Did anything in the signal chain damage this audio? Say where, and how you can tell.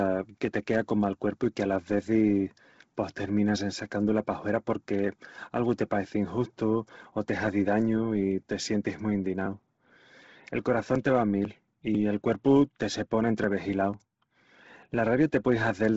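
Yes. At the codec stage, likely Bluetooth LC3 compression near 16 kbps: the speech has a heavily grainy, breathy edge and nothing above 7.7 kHz.

Periodic USB or driver dropouts at the driver or buffer stage: from 9.46 to 15.44 s, roughly 2 ms is skipped every 0.5 s, producing regular ticks.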